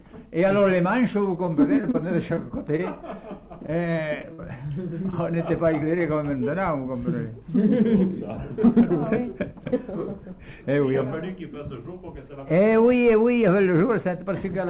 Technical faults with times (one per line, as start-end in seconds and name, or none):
1.24-4.40 scattered short gaps
5.10-5.14 short concealed packet loss